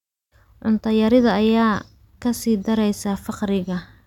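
No technical faults can be heard in the speech.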